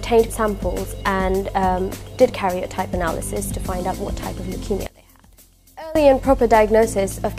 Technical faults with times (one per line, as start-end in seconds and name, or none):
4.87-5.95 one channel inverted